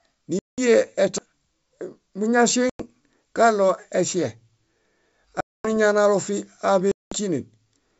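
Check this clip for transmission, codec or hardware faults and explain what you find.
Two kinds of fault are present in this speech: four dropouts from packet loss on an ADPCM call, and one brief CD skip. Underneath them the wideband G.722 telephone coding is clear, with little trace of its own upper-band hiss.

Packet loss on an ADPCM call occurs at 0.39–0.59 s, 2.70–2.81 s, 5.40–5.68 s and 6.92–7.15 s. These gaps lose 190, 100, 240 and 200 ms, which fits runs of roughly ten to twenty packets. Each gap is filled with silence, so you hear a hard-edged hole. When the audio returns, the decoder's predictor and step size no longer match the sender's. The speech comes back slightly distorted, then settles within tens of milliseconds. Unlike a skip, the timeline continues unbroken after each gap.

The CD skip occurs at 1.18 s. The laser jumped to another turn of the spiral, and the player muted for about 7 ms. 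You hear a tick followed by an abrupt displacement in the material. There is no recovery distortion afterwards. Instead, playback resumes from a different point on the disc.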